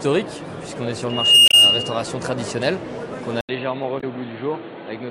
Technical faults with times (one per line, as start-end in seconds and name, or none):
1.09-2.03 loudspeaker feedback squeal
1.48-1.54 damaged data in a compressed stream
3.41-5.10 input switched to a poorer device
3.97-4.04 damaged data in a compressed stream